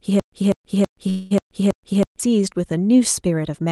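From the very start to 2.20 s there's a stutter with silent gaps: a 195 ms burst repeats every 324 ms with about 129 ms of dead silence between, likely a stalled stream replaying its last fragment. Overlapping that, from 1.09 to 1.33 s, you get a call audio freeze, where the sound smears into a fading buzz or hiss for about 213 ms, likely a drained jitter buffer, before picking up where it left off.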